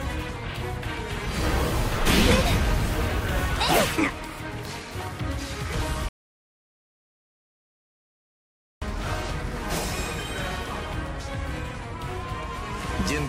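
At 6.09 s there's a rebuffering stall: the player ran dry, went silent until 8.82 s, then picked up exactly where it stopped, adding about 2.7 s.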